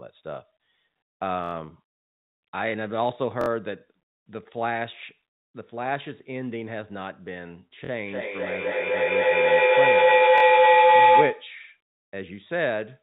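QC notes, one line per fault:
1.44 s, 3.41 s, 7.85 s and 10.38 s, repeated buffer: new audio arrived late, so the last 23 ms block replayed. It played four, three, two and two extra times, giving a machine-gun stutter with hard joins, which fits a 1024-sample buffer.
8.06 to 11.59 s, feedback howl: two devices in one room share the call, and each mic-to-speaker trip adds gain. The tone narrows to around 1 kHz, pulses at roughly 300 ms, peaks about 12 dB above speech, and continues until the loop breaks.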